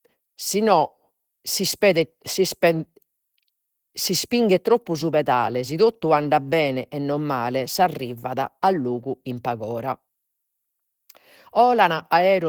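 From start to end the speech sounds muffled and hoarse, its upper bands grainy and noise-filled, likely from Opus compression in its hybrid speech mode at a low rate near 16 kbps. A spectrogram shows smeared, noise-like highs ending at 20.2 kHz.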